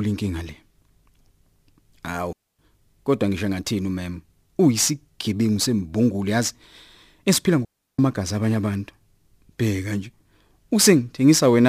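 Clean holes of near silence cut into the speech at 2.33 s for about 0.26 s and at 7.65 s for about 0.34 s, with no noise burst either side. These are digital wireless dropouts: the receiver lost too much data and muted with a very short fade.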